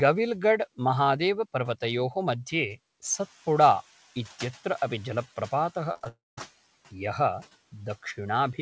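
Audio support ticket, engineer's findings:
Noise suppressor catching up, 3.02–3.27 s. Room noise steps up by about 11 dB around 3 s; the suppressor's noise estimate lags, so the louder background leaks through at first, then sinks by about 7 dB over roughly 250 ms as the estimate re-converges.

Repeated packet loss (robotic sound), 5.92–6.06 s, right after "अपि जलप्रपातः". Jitter buffer/PLC: six short holes, longest 21 ms, each patched by extending the previous frame. About half the span is concealed, giving choppy texture with fragments missing.

Long network dropout, 6.08–6.38 s, immediately following the choppy stretch after "अपि जलप्रपातः". Likely cause: network stall starving the receiver. About 290 ms of audio is lost. Concealment holds the last sound as a fading buzz or hiss, then roughly 190 ms of silence before audio resumes past the gap.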